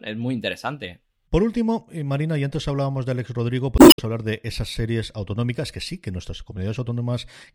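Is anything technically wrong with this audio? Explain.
Yes. From 3.75 to 4.00 s, damaged data in a compressed stream: corrupted bytes make the decoder misread frames and lose sync while hunting for the next valid header. The result is a brief chirp, squawk, click or short hole in the speech, and the passage runs 44 ms longer.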